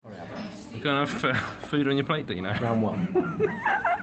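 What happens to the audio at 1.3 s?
Nothing goes wrong at 1.3 s: the audio carries on intact through that moment, with only the ordinary character of the call path it travelled through.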